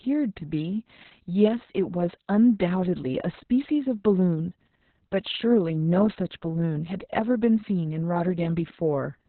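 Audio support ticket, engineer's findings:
Muffled, hoarse, slightly robotic speech throughout, nothing above 4.3 kHz. Opus voice compression: narrowband SILK coding, coarse excitation, which fits a bitrate around 6 kbps.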